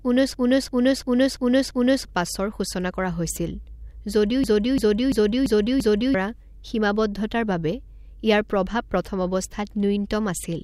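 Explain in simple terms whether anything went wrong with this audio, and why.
Something did go wrong: a system hang loop, twice, from 0.34 to 2.05 s and from 4.44 to 6.14 s. The playback froze, and the same 0.34-second chunk repeated exactly five times, a machine-gun stutter rather than a buzz or gap, losing about a second and a half of speech each time.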